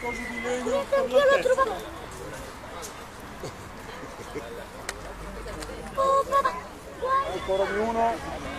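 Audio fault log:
1.58–1.65 s, 5.95–5.99 s, 6.41–6.46 s, 8.41–8.47 s: damaged data in a compressed stream. Corrupted bytes throw the decoder out of sync, so each 45–70 ms stretch becomes a chirp or blip before it relocks. On a spectrogram, these appear as brief broadband smears; in the waveform, as discontinuities.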